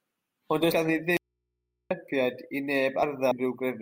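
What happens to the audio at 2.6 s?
Nothing goes wrong at 2.6 s: the speech carries on intact there, with no dropout, click, distortion or other fault.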